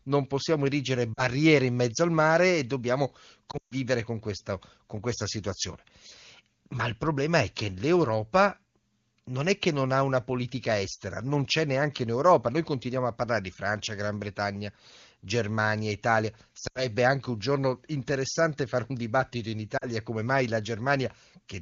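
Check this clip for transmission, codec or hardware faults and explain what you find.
Lost AMR speech frames affect four spots in this speech: 1.14–1.26 s (about 40 ms lost, between "non possiamo erigere" and "in mezzo al mare"), 3.51–3.73 s (about 160 ms scattered over 200 ms, longest run 140 ms, between "al mare e dobbiamo" and "con questa con questa"), 16.67–16.90 s (about 80 ms, just before "anche un giorno interessante") and 19.77–19.88 s (about 40 ms). Radio errors failed the frame checksums, so the wideband decoder repeated its last good pitch and vocal tract settings at falling gain. The speech drops to near silence within two frames, worst at 3.5 s, then returns weak or rough for a moment.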